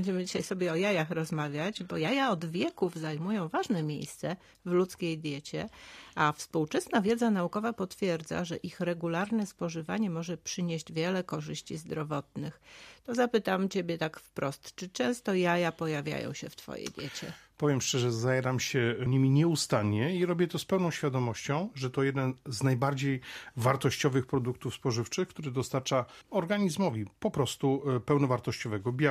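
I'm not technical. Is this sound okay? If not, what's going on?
No. For the first 4 seconds the sound is dull and smeared, then abruptly turns clear. That's an adaptive stream starting at a low bitrate: the player began on a lower-quality version to start fast. Unlike a connection dropout, nothing goes silent during the switch.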